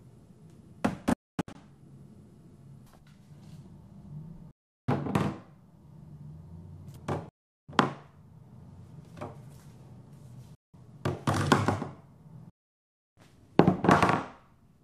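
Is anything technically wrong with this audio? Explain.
Yes. The audio goes silent five times: 1.13–1.55 s, 4.51–4.88 s, 7.29–7.69 s, 10.55–10.74 s and 12.50–13.17 s. The pattern is most likely a Bluetooth dropout. Packets arriving too late at the headphones are discarded, so nothing plays until good data returns, and the sound picks up further along as though it had kept going. On a waveform each gap is a flat line with sharp edges, and a spectrogram shows a blank vertical band. The first gap is broken up, with a longest hole of about 255 ms. The last one is the longest, at about 0.67 s.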